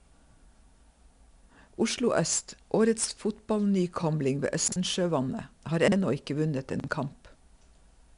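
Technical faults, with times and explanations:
Throughout, 4-bit ADPCM compression: every loud stretch of the speech carries a gritty hiss that rises and falls with the level, and sharp onsets sound roughened because the adaptive step cannot grow quickly enough to track them. Unlike a steady background noise floor, this grit fades in quiet gaps. The audio has nothing above 10.6 kHz, and the damage is plainly audible. An 88 kbps rate fits 4-bit samples at about 22 kHz, which also explains the dull top end.
4.68 to 4.76 s, 5.88 to 5.96 s and 6.8 to 6.88 s, chunks out of order: at each point, one 40 ms chunk of speech plays one chunk late, so it swaps places with the chunk that should follow it. Each 80 ms stretch sounds briefly jumbled. Unlike a dropout, no audio is missing and there is no gap or silence. The sound is complete but briefly scrambled.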